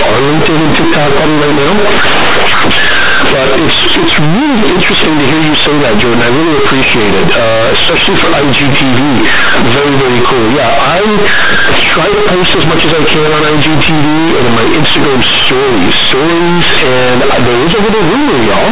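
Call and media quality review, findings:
Companded audio read as linear, whole clip: harsh, very loud buzzy distortion on speech, heavy hiss in pauses. Mu-law bytes going out as raw 8-bit with no expansion, so each sign flip swings half the range and quiet bits blow up.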